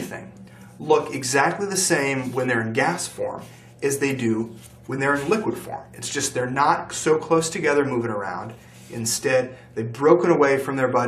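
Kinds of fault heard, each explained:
No audible faults detected.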